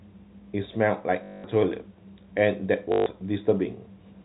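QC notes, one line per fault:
1.24–1.44 s and 2.92–3.06 s, packet loss with last packet repeated: a robotic stutter that buzzes at about 50 Hz, lasting 200 ms and then 140 ms. This fits 20 ms packets dropped and the last one replayed out of step with the pitch, through the band-limited G.711 telephone path.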